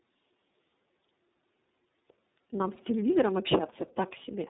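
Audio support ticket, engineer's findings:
Rough, muffled, warbly speech for the whole clip, nothing above 3.8 kHz. Tandem speech coding: sound points to three speech codecs in series, ending in an iLBC-type low-bitrate coder. Each link decodes and re-encodes the previous link's already degraded output, so artefacts stack.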